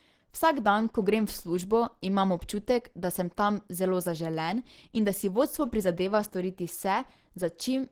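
Throughout, the speech carries plainly audible Opus compression, likely in its hybrid speech mode at a low rate consistent with about 16 kbps. It sounds muffled and hoarse, and a spectrogram shows grainy, noise-filled upper bands that still reach about 20.3 kHz.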